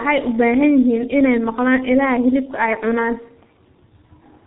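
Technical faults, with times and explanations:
Throughout, G.723.1 codec: heavy damage leaves the speech muffled and hoarse, with smeared consonants, which fits a 6.3 kbit/s low-rate coder; the spectrogram shows nothing above 4 kHz.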